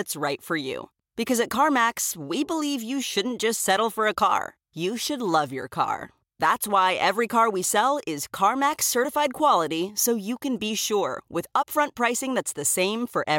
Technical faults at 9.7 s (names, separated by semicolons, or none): none